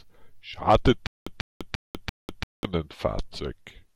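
From 1.07 s to 2.65 s there's a stutter with silent gaps: a 144 ms scrap of speech repeats four times every 341 ms, with about 197 ms of dead digital silence between. It's likely a stalled stream replaying its last fragment, so the speech in that span is lost.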